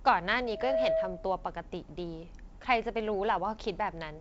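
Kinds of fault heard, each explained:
Loudspeaker feedback squeal: the microphone picks up its own loudspeaker, and at 645 Hz the loop gain passes unity, so that tone feeds on itself. It swells over roughly a third of a second from 0.46 s, sits about 5 dB above the speech, and stops at 1.49 s.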